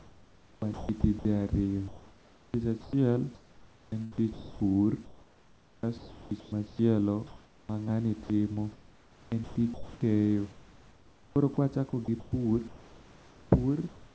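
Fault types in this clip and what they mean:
Sound chopped by the voice detector: in three stretches between 0 and 14.1 s, quiet syllables and word edges keep giving way to synthetic comfort noise, likely from voice-activity switching, so the speech sounds choppy.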